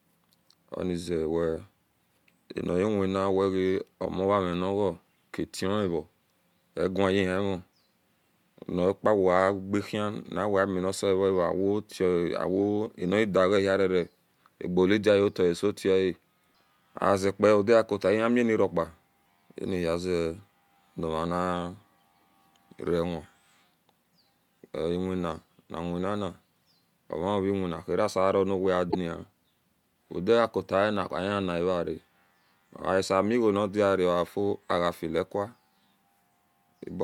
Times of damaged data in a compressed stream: 28.88-28.95

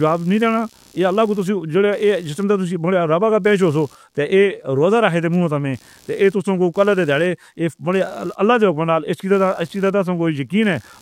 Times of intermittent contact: none

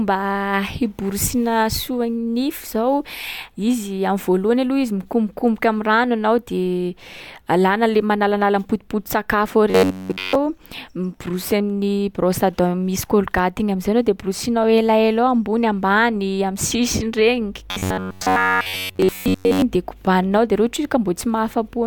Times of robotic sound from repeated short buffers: 9.70-10.35, 17.71-19.62

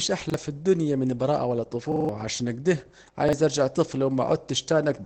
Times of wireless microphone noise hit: none

